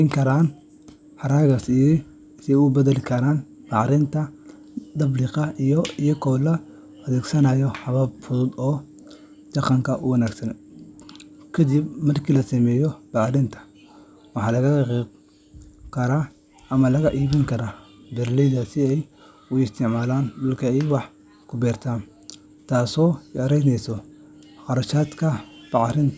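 From 0.0 to 1.6 s the speech carries a steady ticking at 10 per second, the signature of a resampler restarted on every block. The 48 kHz to 16 kHz conversion was evidently run on 100 ms blocks independently, so each block edge was filtered against missing or wrong neighbouring samples. The resulting small discontinuity at every boundary produces a regular tick that rides on the signal and drops away in pauses.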